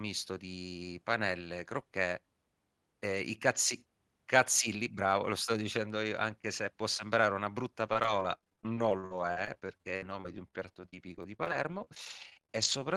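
From 7.82 s to 12.8 s, repeated packet loss (robotic sound) sets in: dozens of short gaps, the longest about 51 ms, are each patched by stretching the previous sound. Roughly a second gets rebuilt, leaving the speech choppy, with pieces missing.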